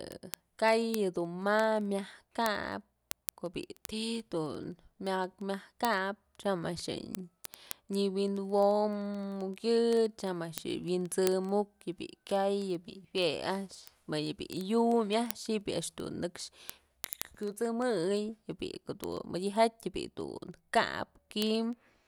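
From 0.12 s to 22.07 s, the speech carries word clock ticks. They recur about every 40 ms, roughly 25 times a second, for around five hundred ticks in total. The receiving device was running on its own clock, not locked to the sender's digital link. The two clocks drift apart by something near 500 parts per million. Each time they slip past each other, a single sample is dropped or repeated. That glitch is heard as a steady, rapid ticking under the speech.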